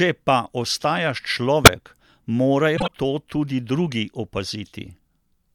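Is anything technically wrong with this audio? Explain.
Yes, the speech has two decoding faults.

A corrupt frame was decoded from 1.64 to 1.69 s. Damaged bits in what sounds like a single compressed frame were played regardless, so misread gains and codes put energy at the wrong frequencies. The result is a short chirp, squeak, blip or burst of noise.

Compressed frames were skipped from 2.76 to 2.91 s. The decoder never played some frames, so the speech jumps ahead by around 30 ms. The join is heard as a brief blip or a click.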